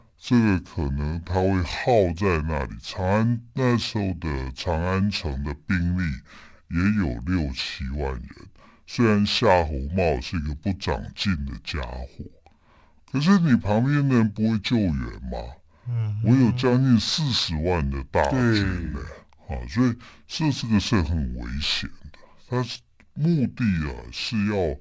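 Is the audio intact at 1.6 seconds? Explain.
No. At 1.6 seconds, as across the whole clip, the speech suffers from a wrong sample rate: audio recorded at 24 kHz is being played at 16 kHz with no conversion. Everything runs at about two-thirds speed and drops about 7 semitones, so the voice sounds low, slow and drawn out. On a spectrogram, formants and harmonics sit lower than normal and the top of the spectrum cuts off near 8 kHz. The waveform looks stretched in time.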